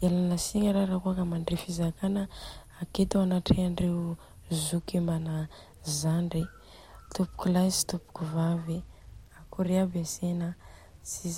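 From start to finish the speech carries a grainy, gritty distortion that rises and falls with the sound itself, roughest on quiet syllables and trailing ends, where the signal sputters or drops out instead of fading smoothly. The error sits about 40 dB below the speech. The likely cause is low bit depth without dither: the samples were truncated to a few bits, which fits a 10-bit signal, so the rounding error tracks the waveform rather than forming a steady hiss.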